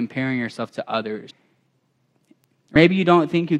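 At 1.29 s, just after "yourself to", the sound jumps forward with compressed frames skipped. Roughly 400 ms of audio never plays, which points to around fifteen whole codec frames lost from the stream or rejected by the decoder as corrupt. At 2.75 s the same fault recurs on a smaller scale: about 50 ms goes missing, consistent with several frames dropped.

At 2.44 s there is a bit error spike. A single sample has one bit flipped somewhere in memory or on a digital link, so its value leaps by a power of two and returns immediately on the next sample. The result is one sharp, broadband tick that has no relation to the surrounding sound.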